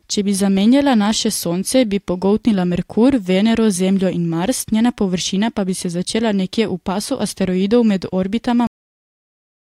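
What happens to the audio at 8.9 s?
At 8.9 s the speech has already stopped: a cut-off end begins at 8.67 s, right after "v pasu asteroidov med", and lasts to 9.72 s. The final buffers never reached the output, so the sound halts mid-phrase into digital silence, with no decay and, unlike a dropout, no return.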